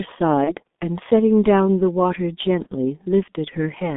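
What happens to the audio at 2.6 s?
VoIP packet loss concealed by the speech codec occurs from 2.63 to 2.67 s. A gap of about 30 ms, which fits a single lost G.723.1 frame, was filled by the decoder repeating its last pitch and filter at falling gain. The sound briefly turns into a fading buzzy smear, and the next moment stays weak as the codec recovers. Throughout, the heavy G.723.1 coding at 6.3 kbit/s keeps the speech muffled and hoarse, confined to roughly 200 Hz to 3.6 kHz.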